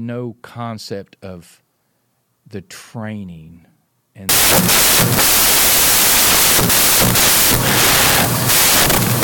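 At about 4.29 s the speech turns into loud, harsh broadband noise that runs to the end of the clip: samples built from the wrong bytes. The reader is assembling each sample with its bytes misplaced, so the jittery low bits become the big part of every value.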